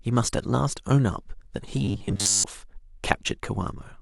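Speech clip with robotic sound from repeated short buffers between 1.85 and 2.44 s: the voice collapses into a rigid 100 Hz metallic buzz, likely from a roughly 10 ms buffer being replayed while most of the real audio is skipped. Unlike comb filtering, the repeats impose a fixed-rate buzz rather than mere colouring.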